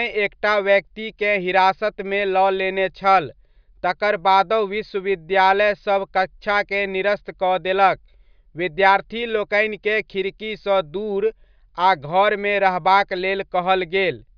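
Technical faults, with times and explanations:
No technical faults can be heard in this speech.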